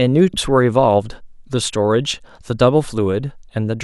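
At about 0.34 s the speech jumps forward, losing roughly a third of a second of audio. This is compressed frames skipped: several whole frames, which fits a 32 ms frame length, were never decoded and played.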